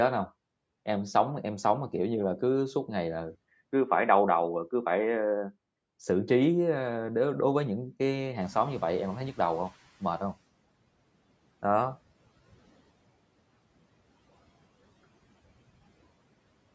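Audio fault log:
3.35–5.76 s, input switched to a poorer device: after a brief gap of about 20 ms the sound turns dull and boxy, with a narrower band, while the level stays roughly the same and a new but very faint noise bed appears, around 50 dB under the signal. At 5.76 s the fuller, wider sound returns. The cut in bandwidth and the change of tone point to a likely switch to another microphone or a headset's call profile.
8.4–10.38 s, noise suppressor catching up: around 8.5 s the room noise jumps by about 14 dB and at first comes through with less reduction, then fades over roughly 1.98 s as the suppressor's noise estimate catches up with the new, higher floor and cuts it by about 16 dB. The audible sinking of the noise over those two seconds is that lag in adaptation, with the raised room noise settling about 23 dB below the speech.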